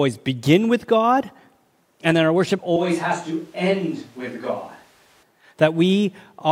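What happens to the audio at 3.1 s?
A switch to a distant microphone runs from 2.77 to 5.23 s, just after "and that our worship": the sound suddenly turns hollow and roomy, about 5 dB quieter, likely because the close microphone dropped out.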